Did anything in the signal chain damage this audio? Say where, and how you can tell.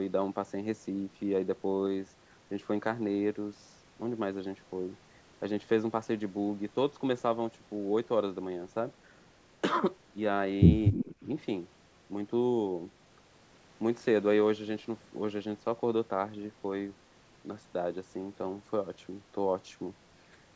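Yes, in the call processing stage, around 10.9 to 11.3 s. Two echo-canceller faults overlap there.

Speech suppressed in double talk: from 10.91 to 11.09 s the speech level sags, bottoming out around 10 dB down, for a total of roughly 150 ms. The dip coincides with another signal arriving, which points to the echo canceller's double-talk handling. It likely could not tell the local talker apart from loudspeaker echo, so it attenuated everything while both were active.

Echo leak: starting at 10.96 s and lasting to 11.25 s, a faint delayed copy of the speech sits underneath, trailing by 307 ms and roughly 15 dB below the direct signal. The fixed lag and reduced level mark it as likely acoustic echo from a far-end loudspeaker that the canceller there did not fully remove.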